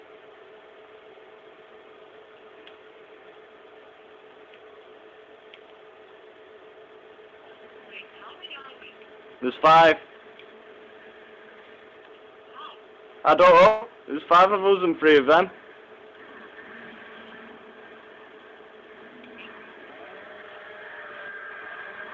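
At 8.62 to 8.65 s there is a short concealed packet loss: about 20 ms of audio failed to reach the decoder in time, and the receiver filled roughly 16 ms of it by extending the preceding sound before blending back into the real signal. It passes as a brief smear or wobble rather than a gap. Because so little is replaced and the audio resumes almost at once, nothing audibly decays, which sets it apart from a longer burst.

At 13.67 to 13.83 s comes a burst of packet loss, about 140 ms of consecutive missing audio, all of it concealed, with no stretch of silence. Over that span the receiver keeps extrapolating the last sound and turns it down as the gap continues, so a tonal stretch becomes a held buzz and a noisy one a fading hiss. The audio then picks up further along, with the intervening material gone. The audible fade and the skip forward distinguish it from the brief smear at 8.62 s. 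Throughout, the G.722 call path at 64 kbps leaves nothing above 8 kHz.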